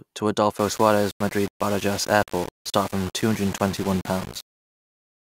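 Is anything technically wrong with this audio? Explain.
Yes. From 0.58 s onward the speech turns grainy and gritty. This is likely low bit depth without dither, consistent with about 5-bit rounding: the error follows the signal, leaving distortion roughly 15 dB below the speech. The waveform looks visibly stair-stepped, and the spectrogram shows broadband grit that rises and falls with the speech.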